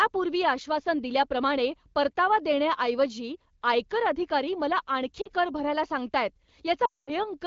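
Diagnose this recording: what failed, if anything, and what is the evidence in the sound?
The failure is in the network stage: lost AMR speech frames on the radio link. Between 5.21 and 5.29 s, after "देण्याऐवजी आयकर अधिकारी मला" and before "कर भरायला", there is a 40 ms dip and warble, consistent with two lost frames. From 6.85 to 7.11 s the sound drops to near silence within two frames of a 220 ms gap, as the decoder repeats its last good pitch and vocal tract settings with falling gain. On a spectrogram, harmonics smear into flat bands and then go blank. On the waveform, the envelope sags and tapers toward zero.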